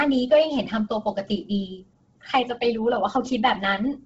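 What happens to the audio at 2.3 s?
The speech at 2.3 s has likely passed through Bluetooth LC3 compression running near 16 kbps in 10 ms frames. The codec zeroes much of the upper spectrum and fills it with noise, leaving nothing above 7.7 kHz and a heavy, breathy, grainy edge throughout.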